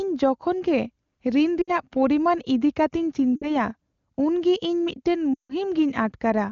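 Lost AMR speech frames at 1.62–1.71 s before "ᱯᱚᱨᱤᱢᱟᱱ ᱤᱫᱤ", 3.35–3.55 s, and 5.34–5.52 s after "ᱩᱱᱜᱮ ᱤᱧ ᱢᱤᱫᱴᱟᱝ". The decoder stretches the last good sound, which fades to silence. The last gap is longest, about 160 ms.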